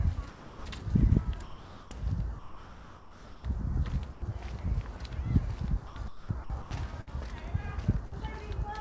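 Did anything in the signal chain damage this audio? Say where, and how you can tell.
Yes. Call processing at the sender is likely at fault: sound dropped by the voice detector at 0.29–0.65, 1.43–1.91, 2.39–3.44, 4.13–4.22 and 4.97–5.00 s. The sound gives way to steady synthetic noise. On a spectrogram the real texture turns into a flat, featureless band.

From 5.87 to 6.71 s the sound is chopped by the voice detector, again likely switching on and off repeatedly, with about 450 ms replaced by comfort noise. The waveform shows real bursts alternating with uniform low-level fill.

At the network stage there are bursts of packet loss at 7.01–7.10 and 8.06–8.15 s, each losing about 60 ms. Concealment held the last sound and let it fade before the sound resumed further on. This appears as smeared, decaying stripes. G.722 coding above it leaves nothing over 8 kHz.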